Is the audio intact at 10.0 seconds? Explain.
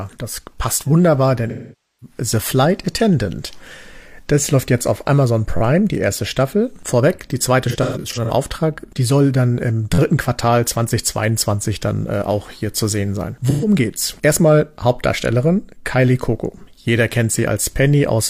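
No. Just before 10.0 s, from 9.94 to 9.99 s, a repeated buffer occurs: fresh audio arrived late, so the device replayed its last 11.6 ms block four extra times, which fits a 512-sample buffer. The result is a brief buzzing stutter with hard joins, though no audio seems lost.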